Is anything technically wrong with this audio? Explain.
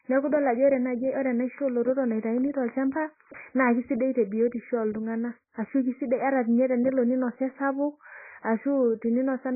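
Yes. For the whole clip the speech sounds heavily compressed, with nothing above 2.5 kHz, a dull, smeared tone, and warbly, fizzy sibilants. That's likely AAC compression, with the encoder chopping the top end and starving bands of bits, which fits a very low bitrate around 12 kbps.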